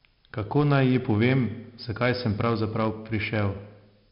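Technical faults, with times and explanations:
Throughout, 4-bit ADPCM compression: heavy gritty hiss rides on every loud stretch of the speech and rises and falls with its level, sharp onsets come out roughened, and nothing is present above 5.3 kHz, leaving the sound dull. Each sample is stored as a coarse 4-bit step from a prediction, so the rounding error becomes broadband noise that tracks the signal. On fast attacks the adaptive step cannot grow quickly enough, which distorts them. The rate fits about 44 kbps.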